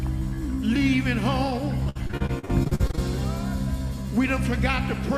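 Repeated packet loss (robotic sound) runs from 1.83 to 2.99 s: fourteen short dropouts, the longest 59 ms, each patched by stretching the preceding sound. About a third of that stretch is filled-in material, so the audio turns choppy, with pieces missing.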